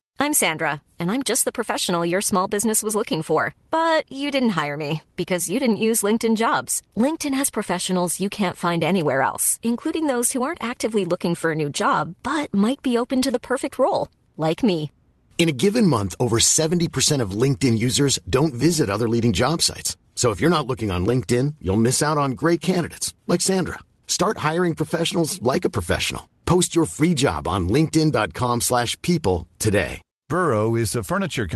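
No technical faults can be heard in the speech. It carries the usual coding texture of a call codec, with the top end stopping at about 12 kHz, which fits an Opus call at around 32 kbps.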